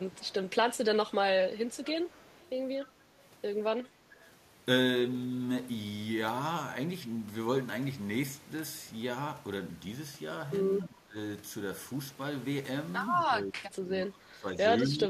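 From 0.0 to 0.5 s, at 1.08 to 1.14 s and from 1.56 to 2.49 s there is echo leak: a faint copy of the speech returns about 243 ms late, roughly 25 to 30 dB down. This is likely a far-end loudspeaker whose echo canceller missed part of the pickup. At 4.02 to 4.16 s, 10.85 to 11.16 s, 13.25 to 14.47 s and from 14.89 s to the end, the speech is suppressed in double talk. It dips by about 10 to 20 dB, most likely because the canceller turned down the talker along with the echo while both sides spoke.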